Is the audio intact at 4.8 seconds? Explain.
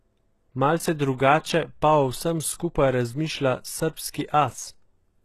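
No. At 4.8 s the speech sounds gritty and metallic in the treble, with s sounds turned lispy and nothing above 12.3 kHz, as throughout the clip. The likely cause is HE-AAC compression at around 16 kbps, which rebuilds the upper spectrum by copying lower bands upward, so harmonics fail to line up across the crossover.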